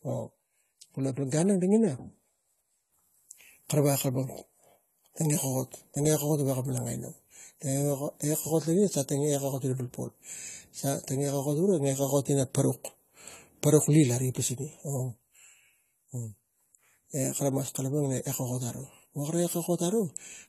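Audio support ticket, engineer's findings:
AAC compression, throughout: speech dull and smeared, with warbling, fizzy sibilants and nothing above 14 kHz. Likely low-bitrate AAC-LC; the cut-off fits around 32 kbps. The encoder is discarding and coarsely quantising high bands against its hearing model.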